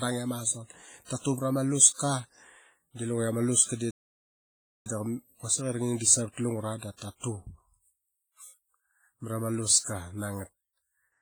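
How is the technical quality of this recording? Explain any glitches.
Quality is pretty rough, honestly. Two things stand out.

The whole clip has a washy, ringing smear on the speech, with hiss that swells and fades along with it. That's most likely WMA compression: a transform codec squeezed hard, which fits a heavily damaged WMA 1 encode at around 24 kbps, smearing quantisation noise and dropping quieter detail.

Then from 3.91 to 4.86 s the audio just stops dead for about 0.95 s before picking up with "quasik i ra". That sounds like a playback stall, likely the player running dry of data or getting blocked, then resuming.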